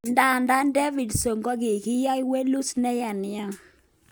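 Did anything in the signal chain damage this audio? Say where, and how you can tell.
No, no signal-chain damage detected.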